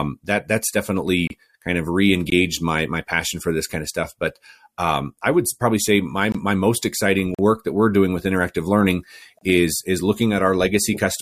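Gaps between stream segments cut the speech at 1.27, 2.30, 6.32, 7.35 and 9.39 s: hard-edged silent holes of 20 to 41 ms where 1-second segments don't quite meet, the longest just after "most exciting".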